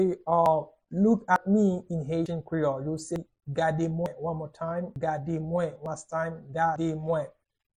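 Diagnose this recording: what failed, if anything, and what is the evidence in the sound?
Audio missing between chunks, likely at the buffer stage. The sound skips at 0.46, 1.36, 2.26, 3.16, 4.06, 4.96, 5.86 and 6.76 s, each time losing about a tenth of a second with no gap. The 0.9 s spacing fits one-second chunks, each losing its changeover.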